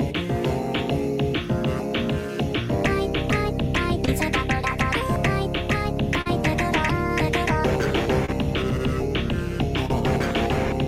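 Short concealed packet loss occurs at 4.05 to 4.09 s, 6.21 to 6.27 s and 8.25 to 8.30 s. Each time, a piece of the audio stream, about 20 ms at the first and third and 40 ms at the second, failed to reach the decoder in time. The receiver covered each gap by extending the preceding sound, then blended back into the real signal. This leaves a brief smear or wobble.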